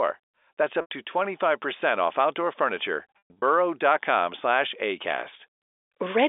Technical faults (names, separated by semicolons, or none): packet loss with pitch repetition